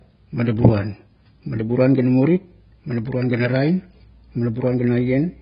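Speech runs through heavy AAC compression from start to finish. Nothing sounds above about 5.1 kHz, so the audio is dull. Sibilants smear into a fizzy, warbling texture. The likely cause is AAC-LC coding, fitting a very low bitrate around 16 kbps.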